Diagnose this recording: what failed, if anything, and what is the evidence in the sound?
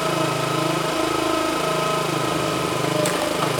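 Doubled audio track throughout: each sound recurs roughly 0.7 s later, equally loud and full-band, likely from an edit or second capture path layering two copies.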